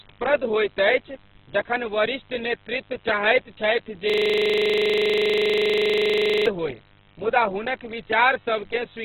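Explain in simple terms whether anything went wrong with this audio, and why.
The whole recording sounds muffled, rough and grainy, with nothing above 4.4 kHz. That points to heavy Opus compression as the likely cause.

After "चाहैत छथि", from 4.10 to 6.46 s, a system hang loop repeats one 40 ms scrap 25 times a second, making a buzz until "होय मुदा हुनक".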